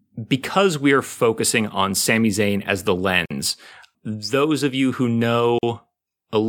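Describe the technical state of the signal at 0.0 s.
At 0.0 s the speech signal is intact, with no audible fault at that moment.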